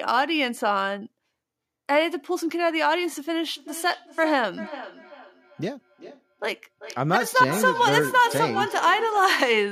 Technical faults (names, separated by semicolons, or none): feedback echo between two devices